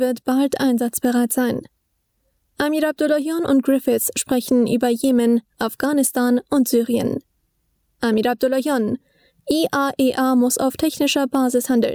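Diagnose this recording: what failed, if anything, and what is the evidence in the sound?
Gain pumping runs throughout, with a gain swing of around 10 dB. The likely cause is input gain set far too high, with a fast limiter in the call processing stage clamping every peak. On a waveform the envelope looks flattened, and a spectrogram shows the noise floor rising and falling with each loud sound.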